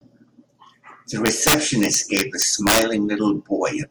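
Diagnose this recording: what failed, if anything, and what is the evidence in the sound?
Integer overflow in the sample-format conversion: from 1.26 to 2.82 s, peaks driven about 7 dB past full scale wrap to the opposite sign, giving harsh cracks well beyond clipping.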